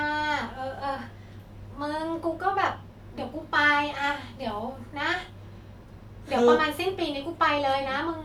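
No technical faults can be heard anywhere in this speech recording. Nothing interrupts or alters the sound at any point.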